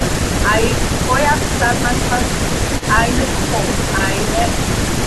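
At 2.79 to 2.84 s there is a brief echo leak: a faint, delayed copy of the speech arriving about 271 ms after the original, at roughly 20 dB below the direct signal. It sounds like a short ghost of the talker rather than a sustained repeat. The likely cause is a far-end loudspeaker feeding its own microphone, with the echo canceller failing to suppress that pickup completely, so a fragment was returned down the line.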